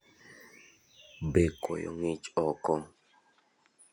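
At 1.65 s the recording system likely switched its input to a poorer device, and the speech stays on that input until the end. The new path passes nothing above 10.5 kHz, so the top end vanishes and the voice turns duller. The level drops by roughly 5 dB, and a faint new background noise appears well below the speech. The change is abrupt, with no silence at the switch.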